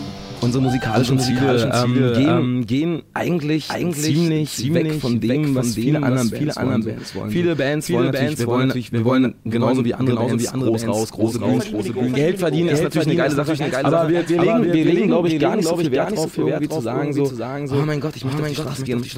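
Throughout, every sound is followed about half a second later by an equally loud, dry duplicate: a doubled audio track, likely from a second, slower capture path.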